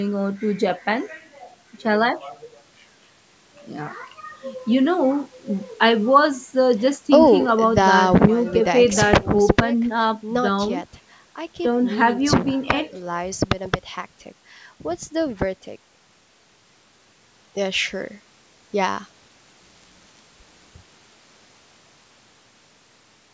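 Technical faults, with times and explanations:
No technical faults can be heard in this speech recording. It has passed through a call's microphone processing, which trims the lowest bass and leaves nothing above 8 kHz.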